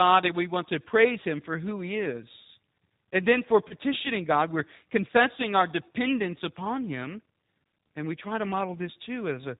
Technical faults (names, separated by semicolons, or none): G.729 codec; VoIP packet loss concealed by the speech codec